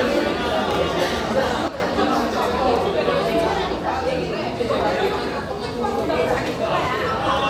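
At 1.68 s a sudden gain jump drops the level by about 10 dB for 0.12 s, until 1.8 s. Sound and background noise fall together, likely from a gain change applied without a ramp. The waveform shows a stepped envelope; the spectrogram shows a uniformly darker band.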